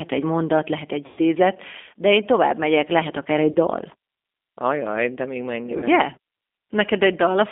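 From the first moment the speech sounds narrow and slightly rough, with a synthetic edge. Nothing comes through below about 250 Hz or above about 3.6 kHz, and the codec damage is plainly audible. This is the G.729 codec at 8 kbit/s, here the G.729A variant. It rebuilds each 10 ms frame from a vocal tract filter, a pitch predictor and a few pulses, so the fine detail of the voice is replaced by a coded approximation.

From 1.06 to 1.20 s the speech smears into a stretched, held sound that weakens as it goes. The voice stays thin for a moment after it returns. This is VoIP packet loss concealed by the speech codec. About 120 ms of audio went missing, which fits a loss of roughly six packets. The decoder filled the gap by repeating its last pitch and filter settings at falling gain, and because each frame builds on the previous one, the recovery lags. Shorter dropouts of the same kind follow at 3.51 to 3.56 s and 5.78 to 5.85 s. 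Each covers about 40 ms, consistent with two lost packets, and each is heard as a brief stretch and dip.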